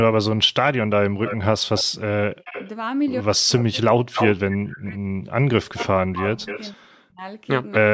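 From 1.24 to 1.84 s and again from 2.44 to 2.69 s, an echo leak brings back a delayed copy of the speech about 282 ms behind the original, at roughly 10 dB and then 15 dB below it. This is likely a far end on loudspeaker whose echo canceller let part of its microphone pickup through. Unlike room reverberation, the copy is a distinct repeat at a fixed lag rather than a smooth decay.

From 3.21 to 7.65 s, speech is suppressed in double talk. Both sides are likely talking at once, and the canceller, unable to separate its talker from the echo, turns both down. For about 3 s in total the speech dips, at worst by around 40 dB. Dropouts from packet loss would not follow the conversation; these track the overlapping talk instead.

Within that stretch the echo returns louder, at about 5 dB below the speech, from 3.58 to 4.81 s. It comes back again from 5.79 to 6.73 s and briefly at 7.71 s, now at about 229 ms delay and roughly 10 and 15 dB down.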